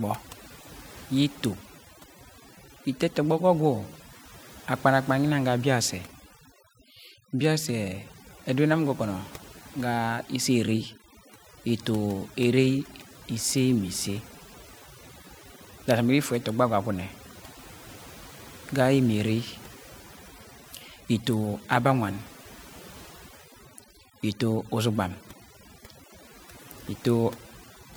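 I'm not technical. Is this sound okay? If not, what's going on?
No. Overdone noise removal runs throughout: a cleanup tool was set too strong, muting quiet sounds with the noise, leaving twinkly near-silence.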